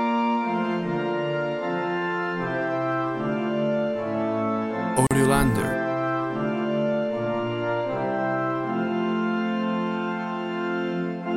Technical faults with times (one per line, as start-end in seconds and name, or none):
5.07-5.11 gap at a join of encoded pieces